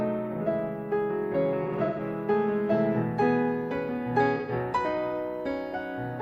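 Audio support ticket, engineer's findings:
AAC frame loss with concealment at 1.63–2.00 s and 4.36–4.52 s. The decoder rebuilds missing frames from the last good spectrum, leaving smeared, noisy or phasey patches. First: about 0.21 s lost in scattered runs, longest around 150 ms. Second: 0.13 s. Gaps filled, not silent like plain dropouts.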